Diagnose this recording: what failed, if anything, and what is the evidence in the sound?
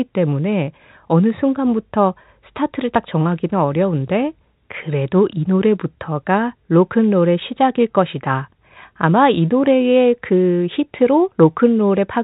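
Nothing failed in this recording.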